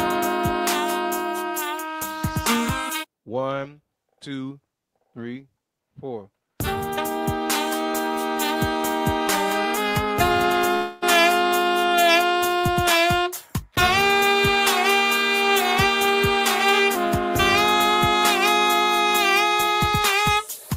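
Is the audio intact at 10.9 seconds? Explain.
No. Audio likely stopped arriving in a long network dropout from 10.75 to 11.04 s, so the last sound is stretched into a fading buzz or hiss, and about 0.26 s is lost.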